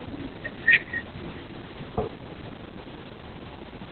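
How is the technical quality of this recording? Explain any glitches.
The technical quality is poor, because heavy Opus voice compression runs through the entire speech clip. The codec is working in its SILK linear-prediction mode at narrowband, which points to a very low rate of around 8 kbps. With so few bits, the band is cut off at 4.3 kHz and the excitation is coded crudely. Speech therefore sounds muffled, hoarse and faintly robotic. On a spectrogram, everything above 4.3 kHz is empty and the harmonics look smeared. The waveform looks normal.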